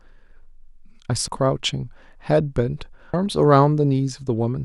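At 1.28 and 3.14 s, damaged data in the compressed stream upsets the decoder, causing a brief chirp, squawk, click or short hole each time that shows as thin spectrogram marks and waveform glitches.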